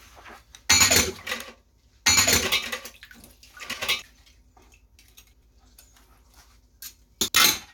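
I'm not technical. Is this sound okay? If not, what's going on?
No. From the very start until 4.02 s, everything is heard twice: a second copy, about as loud as the first, trails roughly a second and a half behind, then cuts off abruptly. This is a doubled audio track, likely from the sound being recorded a second time through a slower route.

Separately, there are brief garbled flutters at 1.31–1.41 s, 3.63–3.83 s, 5.33–5.52 s and 7.21–7.35 s. These are frames out of order: two short neighbouring chunks of the sound got swapped, so each stretch plays its halves in reverse order.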